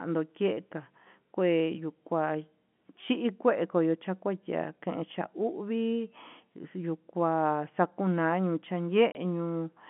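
Packet loss filled with silence occurs at 9.12 to 9.15 s, where a 30 ms gap cuts into the speech, which fits a single dropped packet. The receiver played silence in its place, so the gap has hard edges, heard over the narrow G.711 telephone band.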